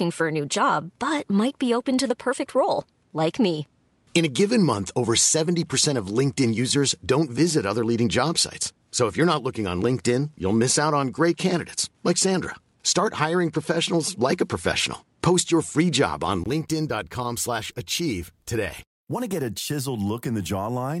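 Input switched to a poorer device, from 0.0 to 16.46 s: for this stretch the speech is band-limited, with nothing above 11.4 kHz, so it sounds duller and slightly boxy, carrying a faint noise floor of its own. At 16.46 s a brief gap of about 20 ms precedes a sudden return of full brightness and a level shift of a few decibels, which points most likely to the recording input changing from a lesser microphone back to the main one.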